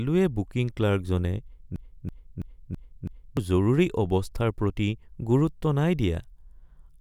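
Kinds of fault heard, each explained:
Broken-record loop: a 0.33 s speech fragment repeats five times, 1.76–3.37 s, likely from a stalled player, showing as identical repeating blocks on the waveform.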